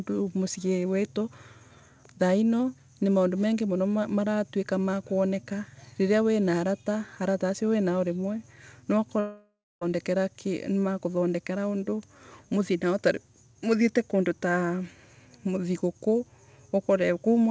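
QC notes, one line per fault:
9.20–9.83 s, long network dropout: about 0.62 s of audio likely never arrived over the G.722 call link, so the receiver stretched the last sound into a fading buzz, then 0.24 s of silence, before speech returns with that stretch lost.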